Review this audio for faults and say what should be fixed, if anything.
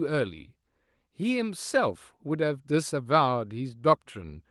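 No faults found; nothing needs fixing.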